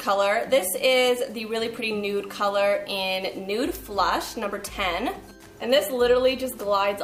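From 4.20 to 5.31 s, GSM signalling bursts break in: a nearby 2G phone's radio pulses are rectified by the audio circuit, giving galloping ticks and 217 Hz buzz about 20 dB below the sound, seen as clustered waveform spikes and 217 Hz harmonic stripes.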